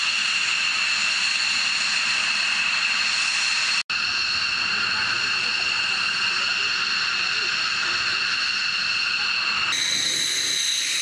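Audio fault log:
9.72–11.01 s, wrong sample rate: the last part of the clip runs about 1.45 times too fast and sits about 6.45 semitones higher, which fits audio captured at 22 kHz being played out at 32 kHz with no conversion. Speed and pitch rise together by that ratio. On a spectrogram, harmonics and formant bands jump upward and stretch apart at 9.72 s. In the waveform, envelopes and cycles look compressed in time.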